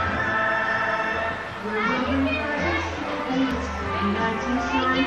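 Damaged data in a compressed stream strikes twice, at 0.33 s and 3.51 s. Corrupted bytes leave the decoder unable to read those frames, so it loses sync and hunts for the next header. Each time, the sound briefly breaks into a chirp, squawk, click or short hole.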